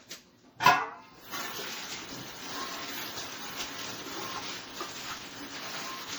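From start to end the sound has a swirly, hollow smear, and sharp attacks go soft. This is generation loss, likely from around seven MP3 re-encodes at about 64 kbit/s. Each pass quantises on a shifted frame grid, so the damage stacks beyond what one low-bitrate encode would leave.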